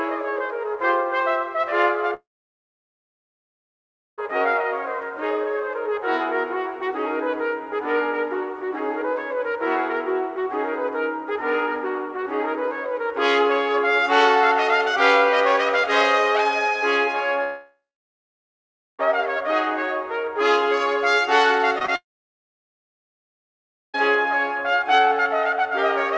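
From 2.14 to 4.20 s comes a long network dropout, likely from audio failing to arrive. The last sound briefly smears into a fading buzz, then about 1.9 s of silence follows. On a waveform this appears as a short decaying tail and then a flat line. A spectrogram shows an empty band before the sound resumes with that stretch lost.

The same long network dropout returns from 17.44 to 19.01 s, again likely caused by missing packets. The fill fades out later here, leaving about 1.2 s of near silence. The waveform flattens, and the spectrogram goes blank until the audio picks up again further on.

Between 21.79 and 21.90 s there are three back-to-back instances of short concealed packet loss, at 21.79, 21.83 and 21.86 s, each roughly 20 ms of missing audio patched over. They come across as a quick smear or wobble. A spectrogram shows smeared, slightly blurred detail with small seams where the patches rejoin the real signal.

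Almost immediately afterwards, from 21.96 to 23.96 s, a third long network dropout follows, likely from another loss of incoming audio. After a brief fading continuation, about 1.9 s is flat silence on the waveform and blank on the spectrogram. The audio then resumes without the lost portion. Throughout, the call path's codec leaves nothing above 8 kHz, which fits a G.722 wideband link.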